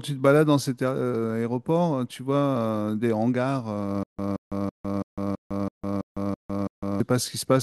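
A speech clip in which, from 4.03 s to 7.00 s, the same 176 ms burst of sound plays nine times at a steady pace, each followed by about 154 ms of dead digital silence, so the pattern repeats roughly every 330 ms. This stutter with silent gaps likely comes from the player or stream stalling: each retry replays the last buffered fragment, then runs dry, and whatever speech belonged in that stretch never arrives.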